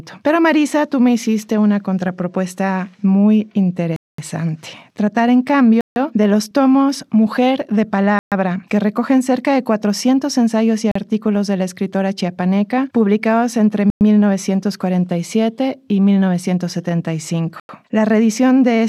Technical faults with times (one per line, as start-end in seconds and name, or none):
3.96-4.18 Bluetooth stall
5.81-5.96 Bluetooth stall
8.19-8.32 Bluetooth stall
10.91-10.95 Bluetooth stall
13.90-14.01 Bluetooth stall
17.60-17.69 Bluetooth stall